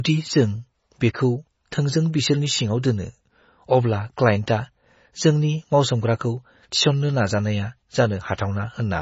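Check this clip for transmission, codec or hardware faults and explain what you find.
The speech runs through the whole clip with heavy MP3 compression artefacts. Nothing is present above 7.6 kHz, which points to a low bitrate of about 24 kbps. The encoder likely ran short of bits, so it cut the treble and switched weak frequency lines on and off between frames. The result sounds watery and swirly, with chirpy s sounds and smeared attacks.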